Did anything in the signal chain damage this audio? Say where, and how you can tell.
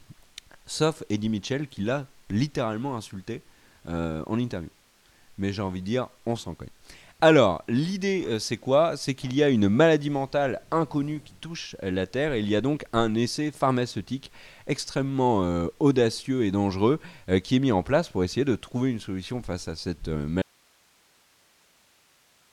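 Yes: audio dropout to a faint residue at 20.42 s, after "solution face à cette", to the end. Only hiss remains, likely from a lost feed into a still-live path.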